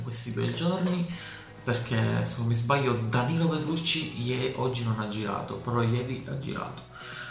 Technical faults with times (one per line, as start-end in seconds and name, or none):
none